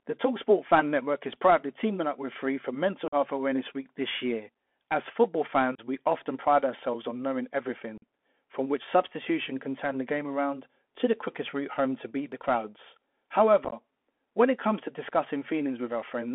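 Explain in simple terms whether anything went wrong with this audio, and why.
The speech went through a Bluetooth CVSD headset codec, the basic phone-call link headsets use. It keeps only a narrow band, about 250 Hz to 3.4 kHz, so the voice sounds thin and boxy, with scratchy s sounds and a gritty hiss throughout.

There is also unconcealed Bluetooth headset packet loss. A handful of small audio packets between headset and phone never arrived, and nothing filled the gaps. This leaves abrupt holes: about 45 ms at 3.08 s, 30 ms at 5.75 s, 45 ms at 7.98 s, and at 13.65 to 13.74 s a broken-up stretch of short dropouts that sounds chopped.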